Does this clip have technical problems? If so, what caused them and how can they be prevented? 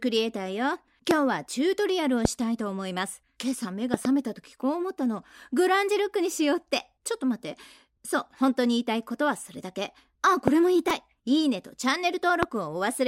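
Yes. Loud pops occur at 1.11–1.13, 2.25–2.27, 10.48–10.50 and 12.43–12.45 s, plus a double pop at 3.94–4.07 s. Each is a sharp transient about 20 dB above the sound, likely from voltage spikes caused by a connector, switch or static discharge. Secure cabling, ground the equipment and avoid switching during recording.

A repeated buffer at 10.90 s replays a 2.67 ms segment four extra times, fitting a 128-sample buffer. It is heard as a brief buzz replacing about 10 ms of audio. Increase the buffer size or reduce system load so audio arrives in time.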